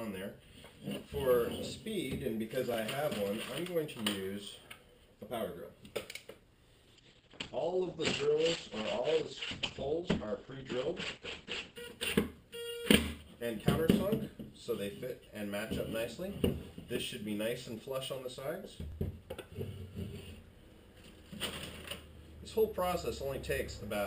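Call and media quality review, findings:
Repeated buffer at 2.74 s and 18.92 s: brief click-like stutter, one short piece played twice with hard joins. The length fits a 20 ms playout buffer. No audio is missing, unlike a dropout.

Call bitrate drop from 6.84 to 11.83 s: rough, watery, muffled sound, with top end cut from 20 kHz to 8 kHz. This points to the Opus encoder falling from roughly 96 to 10 kbps. Unlike plain filtering, coding artefacts accompany the dullness.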